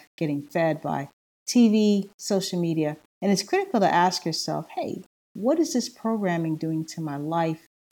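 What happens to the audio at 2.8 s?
At 2.8 s, as across the whole clip, the speech was likely reduced to low bit depth without dither, rounded to about 8 bits, so grainy distortion about 40 dB below the signal tracks the speech and quiet stretches turn gritty.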